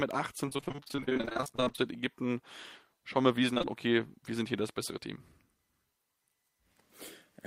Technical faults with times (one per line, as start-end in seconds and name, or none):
0.45-1.80 repeated packet loss (robotic sound)
3.54-3.66 short concealed packet loss